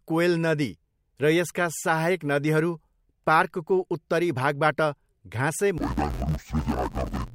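Speech, with interleaved audio read as planar from 5.78 s to the end: short 11.6 ms blocks, which fits 512-sample blocks, make it dull and robotic, buzzing at 86.1 Hz with no clear octave drop.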